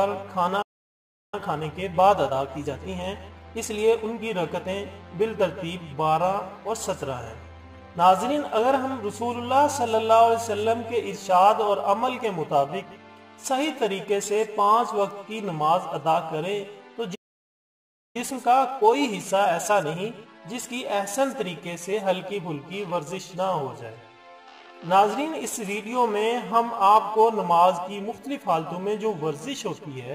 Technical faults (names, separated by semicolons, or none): playback stall; time-compressed catch-up